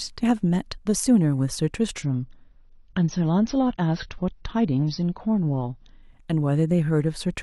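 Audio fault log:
2.02 to 6.02 s, adaptive stream at a lower bitrate: the speech suddenly loses everything above about 6.5 kHz and takes on a thin, watery codec texture with no gap, which points to the stream dropping from around 96 kbit/s to roughly 24 kbit/s AAC.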